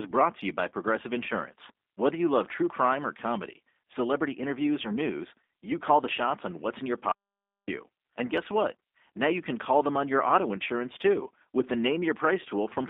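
Throughout, the G.729 codec (G.729A, 8 kbit/s) rebuilds the speech from a filter and sparse pulses. It sounds rough and synthetic, confined to roughly 250 Hz to 3.6 kHz.

From 4.82 to 4.88 s, between "or comedy celebrity interviews" and "news you call the", VoIP packet loss concealed by the speech codec smears the sound into a fading buzzy tone or coloured noise, consistent with about 20 ms lost. A shorter repeat occurs from 10.59 to 10.62 s, after "them on your auto" and before "too with the", consistent with about 10 ms lost.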